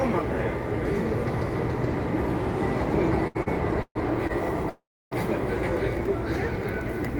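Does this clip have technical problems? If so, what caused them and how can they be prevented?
Yes. From 3.27 to 4.31 s the packets reached the receiver late or more slowly than they were being played, so the jitter buffer ran dry four times. This is repeated stalls (stutter). Each gap, the longest about 130 ms, was filled by stretching the last sound, about 259 ms in all and roughly a quarter of that stretch. Nothing is lost, but the sound drags and stutters. A larger adaptive jitter buffer on a steadier connection would prevent it.

From 4.69 to 5.13 s the sound halts for 420 ms: the last sound is carried on briefly, then about 290 ms of silence, and playback resumes where it left off, now running about 420 ms later. This call audio freeze was likely caused by packets being held up in transit until the jitter buffer emptied. Nothing is missing, but a gap has been inserted. Prioritising the audio traffic and avoiding congested or unstable links would prevent it.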